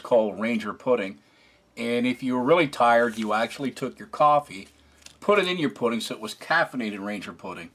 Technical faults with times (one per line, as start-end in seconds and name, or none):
none